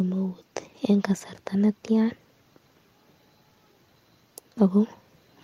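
No technical faults are audible.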